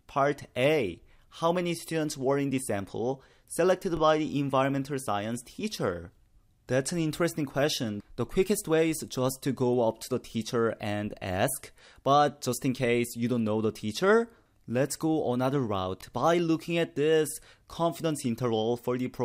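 At 3.97 to 3.99 s, and again at 9.99 to 10.01 s, there is a brief stutter. These are overlapping chunks. The audio was handled in 6-second blocks, and each block began 20 ms early. That 20 ms of sound plays twice, causing a click at each join.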